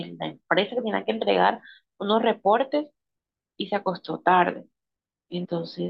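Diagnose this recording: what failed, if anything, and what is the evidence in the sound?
The failure is at the codec stage, from damaged data in a compressed stream. Right near the end of the speech, from 5.44 to 5.46 s, there's a short glitch that doesn't belong to the talker. That's the decoder hitting corrupted bytes: it can't parse the frame properly, loses its lock on the bitstream and has to hunt for the next valid frame header. Whatever it outputs during those 20 ms of confusion is the glitch you hear.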